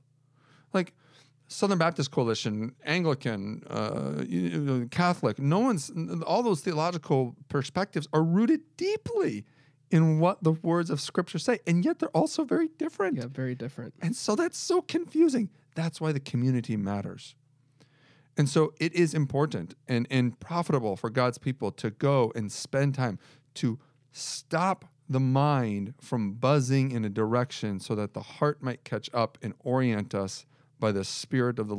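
No technical faults are audible.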